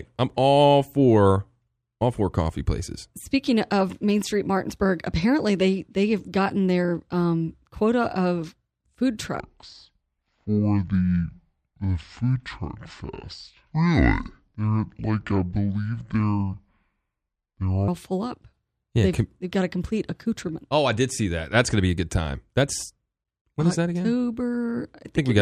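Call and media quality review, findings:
Section at the wrong speed, 9.40–17.88 s: speech slows to 0.564x and drops about ten semitones, pitch and tempo falling together, then snaps back. Likely cause: playback or resampling stage clocked against the wrong rate for this stretch.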